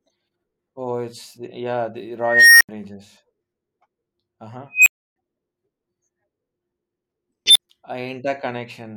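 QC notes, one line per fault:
2.20–2.69 s, unstable filter: after "it's yeah the", a tone around 2 kHz swells over 0.40 s to clipping, then 80 ms of silence as the runaway recursive filter overflows and resets.
4.72–5.16 s, unstable filter: a tone around 3 kHz builds in 0.14 s and is followed by a 300 ms dropout.
7.46–7.59 s, unstable filter: a tone around 4 kHz swells in 94 ms, then 40 ms of silence.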